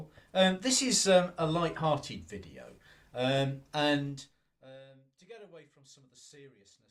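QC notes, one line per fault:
3.98–4.82 s, zipper noise: the level falls by around 25 dB in 1 dB jumps, at roughly 30 steps a second, with no smoothing between them. Each jump puts a small discontinuity into the waveform, so a rapid, even ticking rides on the sound for as long as the fade runs and stops when the level settles. That tie to the level movement, and its regular spacing, sets it apart from random crackle or dropout clicks.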